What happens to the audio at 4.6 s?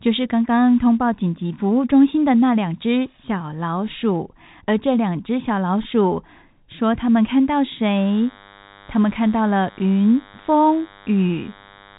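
Nothing goes wrong at 4.6 s; the speech carries straight through that moment with no dropout, click or distortion, only the narrow telephone band of the G.711 coding that runs throughout, with nothing above about 3.8 kHz.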